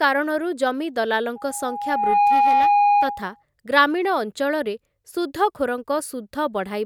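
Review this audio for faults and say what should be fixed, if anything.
Loudspeaker feedback squeal runs from 1.35 s to 3.43 s in this speech: a steady 820 Hz tone swells over roughly a second until it sits around 5 dB above the voice. The microphone is hearing the loudspeaker it drives, and at 820 Hz the loop gain tops unity, so that frequency feeds on itself. Prevent it by lowering monitor gain, moving the microphone away from or behind the speaker, or notching 820 Hz.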